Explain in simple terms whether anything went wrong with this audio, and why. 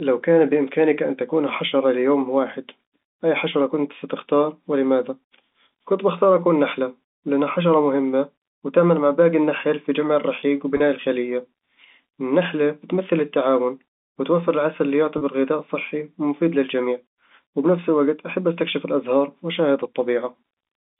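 Two brief packet loss with pitch repetition glitches, at 10.77–10.80 s and 15.18–15.21 s. Each time, a single lost packet's 30 ms gap was filled by repeating the last voice cycle, giving a short buzzy hold.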